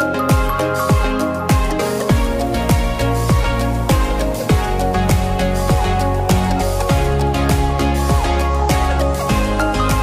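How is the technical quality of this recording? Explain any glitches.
No glitches turn up anywhere in this recording; there's nothing in it that trips, stutters or drops out, so there's really nothing to explain.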